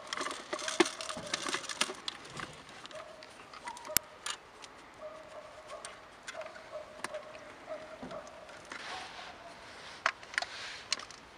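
At about 3.97 s there's a sharp, loud crack lasting only around 5 ms. That's an uninitialised buffer: a block was sent to playback before any audio had been written into it, so whatever happened to be sitting in that memory got played out as samples. The crack's length fits one short buffer of roughly 5 ms, which is why it's over almost as soon as it starts.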